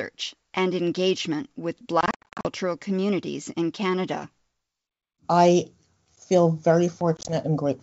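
Speech breaks into hard-edged silent gaps between 2.01 and 2.47 s, after "and engagement with", and again at 7.17 to 7.35 s: packet loss on an ADPCM call, which here dropped about thirty-seven packets.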